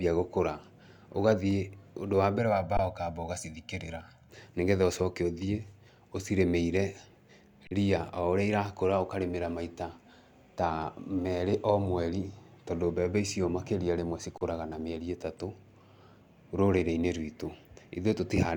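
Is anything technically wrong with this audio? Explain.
Yes. From 2.38 to 4.29 s, channel delay causes comb filtering. One channel lags by roughly 1.5 ms, and the mono sum notches from around 400 Hz, making the speech hollow.

An underrun with held sample occurs at 2.77 s for 20 ms, at 7.67 s for 40 ms, and at 14.38 s for 34 ms. The output runs dry, holds its last value, then resumes where it stopped, ending softly.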